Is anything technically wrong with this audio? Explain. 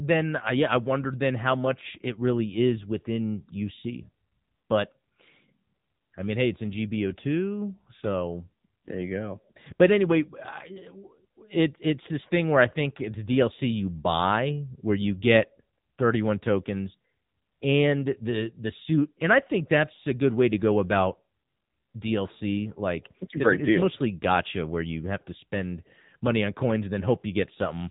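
Yes. The whole clip carries AMR narrowband mobile codec damage. Nothing above about 3.8 kHz survives, so the speech sounds thin and boxed-in. The codec rebuilds each short frame from a vocal-tract model and a few pulses. Its plainly buzzy, synthetic texture fits a low mode near 7.95 kbps.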